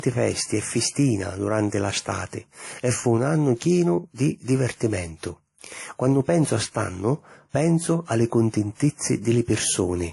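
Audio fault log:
Throughout, transcoding between lossy codecs: the speech carries nothing above 11.3 kHz, with two layers of compression artefacts heard at once. This is likely from the audio being encoded with WMA and then re-encoded as MP3, both at low rates near 48 kbit/s. The MP3 stage spent its limited bits reproducing the earlier codec's damage while adding its own, and the low band limit was kept.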